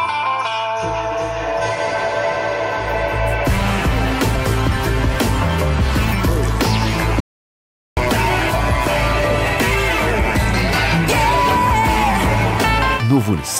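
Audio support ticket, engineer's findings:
Damaged data in a compressed stream: short glitches at 1.60–1.62 s and 8.87–8.89 s, 20 ms each. Decoder misreads corrupted frames, loses sync, resumes at next valid frame header.

Audio dropout to silence: 7.20–7.97 s, about 766 ms of silence, no room tone, abrupt cut and return mid-flow. Likely input loss (device disconnect, link failure or stray mute) while encoder kept writing silence. Content in gap unrecoverable.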